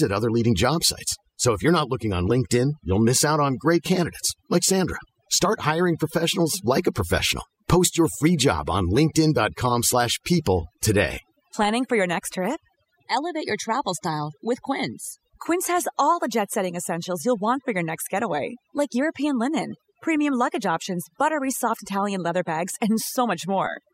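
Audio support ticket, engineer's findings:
Overdone noise removal throughout. Background dropped, breaking up into twinkling specks. Quiet parts of voice removed with noise. Denoiser set too strong, suppressing bands near its noise estimate.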